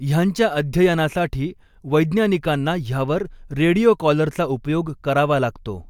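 No dropouts, distortion, clipping or other technical faults can be heard anywhere in the recording, and the signal holds steady throughout.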